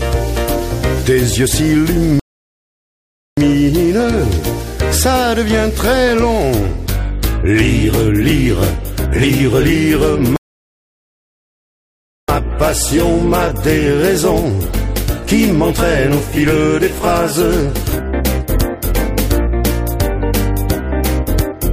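The player twice ran out of downloaded audio and halted until more arrived, producing a rebuffering stall at 2.20 to 3.37 s and again at 10.36 to 12.29 s. Each time the sound drops to silence, then picks up exactly where it stopped, adding 1.18 s and 1.92 s.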